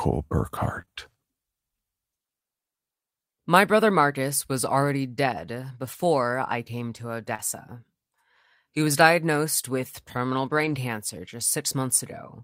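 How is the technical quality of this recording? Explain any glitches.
The recording has audible network glitches from lost packets in a voice call. Two kinds occur.

Short concealed packet loss happens at 0.81 to 0.85 s, again straight after at 0.85 to 0.89 s, and at 7.35 to 7.40 s, just after "I came to". About 20 ms went missing in each of the first two spots, and about 40 ms in the third. The receiver covered each hole by extending the preceding sound. Then it blended back. You hear a brief smear or wobble.

A lost packet rebuilt from error correction appears at 5.93 to 6.03 s, at 7.39 to 7.40 s within the "I came to" glitch, and at 10.45 to 10.75 s after "was diagnosed with terminal". The rebuilt stretches total about 60 ms, 20 ms and 160 ms. The spacing points to several separate lost packets. Each was replaced by the low-bitrate backup copy carried in the next packet. So there is no gap. 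Those moments sound rougher and noisier.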